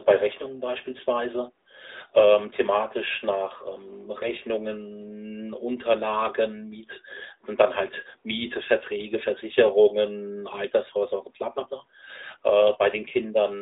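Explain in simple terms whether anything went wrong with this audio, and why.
AMR narrowband mobile codec damage runs through the whole clip. This phone codec rebuilds speech from a simple model of the mouth and throat and discards everything above 3.8 kHz, so the speech sounds muffled, phone-like and plainly buzzy and synthetic.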